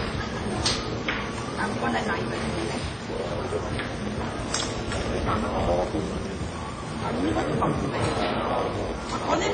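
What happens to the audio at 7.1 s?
At 7.1 s the audio has the block size mismatch (padded) that runs through the whole clip. Each read block, which fits a 512-sample size, is topped up with zeros, giving a steady 86.1 Hz buzz and a 0.938× slowdown at normal pitch. A regular block-rate buzz sets it apart from random dropouts.

Also throughout, nothing sounds above 9 kHz, and the artefacts of two different codecs overlap. That mix, rather than one codec's artefacts, is likely transcoding between lossy codecs, with WMA and then AAC-LC each at 32 kbit/s.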